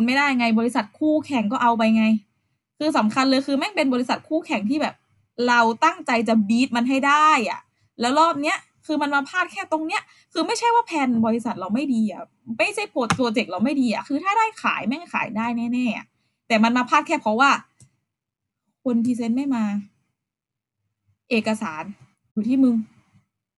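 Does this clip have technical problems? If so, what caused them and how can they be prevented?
No, nothing in this speech recording points to a technical fault. With no fault present, there is no cause to trace and nothing that needs preventing.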